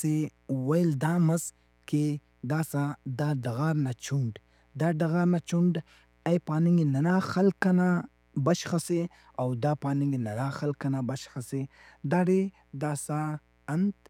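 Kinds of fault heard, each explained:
Mains buzz: a steady, raspy buzz sits under the speech for the whole clip, well below it at about 40 dB down. It comes from 60 Hz mains interference entering the signal path as sharp switching spikes, twice per cycle, the sort a dimmer, rectifier or poorly shielded cable lets in. Those spikes carry a dense ladder of 60 Hz harmonics reaching into the kilohertz range, which gives the buzz its edge instead of a smooth hum.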